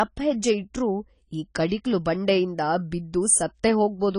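From start to end the speech is dull, with nothing above 10 kHz, and sibilants and held vowels fizz and warble. A spectrogram shows a hard ceiling at 10 kHz. The likely cause is AAC compression at a low bitrate, around 24 kbps.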